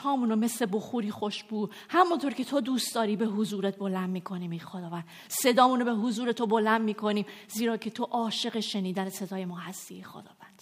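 No technical faults can be heard anywhere in this clip.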